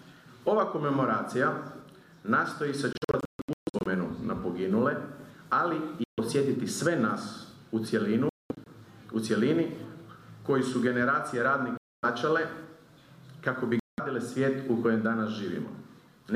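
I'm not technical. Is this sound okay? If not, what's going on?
No. The sound cuts out at 2.93 to 3.87 s in several short gaps, then 6.04 to 6.20 s, 8.29 to 8.67 s, 11.77 to 12.05 s and 13.79 to 14.00 s. This is a Bluetooth dropout, likely the wireless link losing bits of audio. Each gap goes silent. The sound then resumes further along, as if it kept playing.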